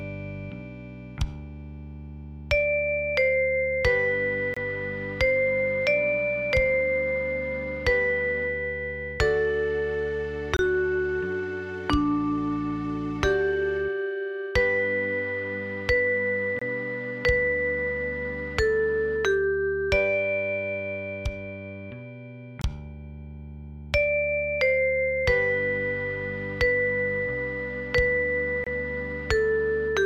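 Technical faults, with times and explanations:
4.54 s, 10.57 s, 16.59 s, 22.62 s and 28.64 s, gap between chunks: the sound stops dead for about 25 ms and then carries on exactly where it left off. The holes fall every 6.0 s, which points to the audio being delivered or stored in 6-second pieces with silence inserted at each join. Unlike a dropout, nothing is missing. The material is pushed later, not cut out.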